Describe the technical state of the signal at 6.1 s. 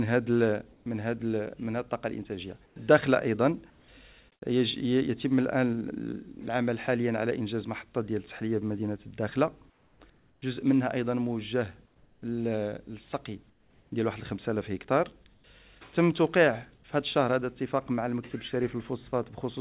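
At 6.1 s the audio is intact, carried through the WebRTC call path with the narrow band of a G.711 mu-law codec, nothing above 4 kHz, which fits a 64 kbps telephone-grade stream.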